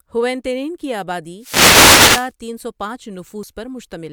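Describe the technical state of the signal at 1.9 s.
At 1.9 s you're in the middle of a wireless microphone noise hit, running from about 1.38 to 2.33 s, between "ہوئیتینن کی" and "تین سو پانچ". The FM radio link fades as reflections cancel, so receiver noise swells into a swish of static over the speech.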